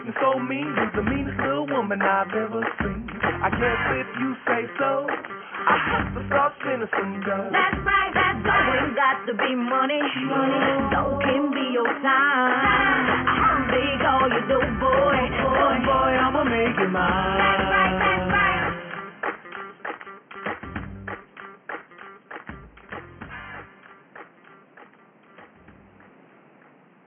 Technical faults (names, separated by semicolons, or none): none